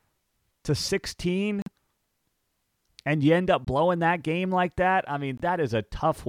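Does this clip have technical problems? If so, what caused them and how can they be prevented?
Yes. The speech has three abrupt dropouts from corrupt frames being muted: 1.62 to 1.68 s, 3.65 to 3.68 s between "and you end up" and "that game like that", and 5.37 to 5.41 s just after "game like that I". Each gap lasts roughly 30 to 60 ms. Damaged compressed frames were rejected by the decoder and replaced with silence, so the waveform flatlines with hard edges and the spectrogram shows a clean vertical blank band with no shift in timing. Adding error protection or concealment that interpolates lost frames, rather than muting them, would prevent this.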